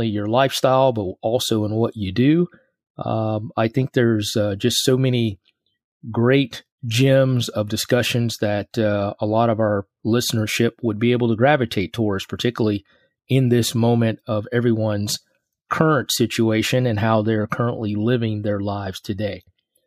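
No technical faults can be heard in the audio.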